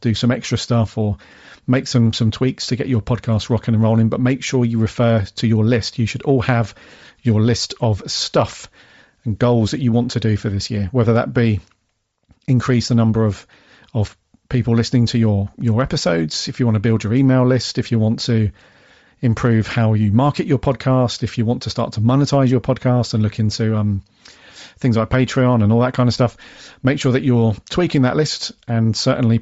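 Throughout the speech, the audio has likely passed through Bluetooth LC3 compression at a low bitrate, with damage consistent with about 32 kbps and short 7.5 ms frames. Much of the upper spectrum is discarded and replaced with noise fill, leaving voices with a plainly audible breathy, grainy edge.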